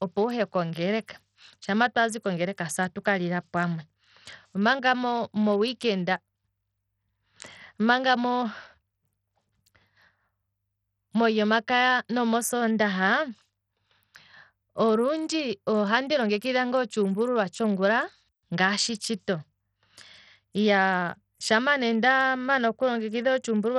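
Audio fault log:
Throughout, Bluetooth SBC compression: the speech has heavy damage, with the treble thinning out and flickering and a gritty, aliased haze over everything. That's likely SBC coding with a starved bit pool, so the top sub-bands lose their bits, which fits about 64 kbps.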